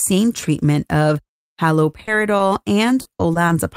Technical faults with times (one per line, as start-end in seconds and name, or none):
1.91-2.09 short concealed packet loss
2.37-2.41 short concealed packet loss
3.01-3.51 repeated packet loss (robotic sound)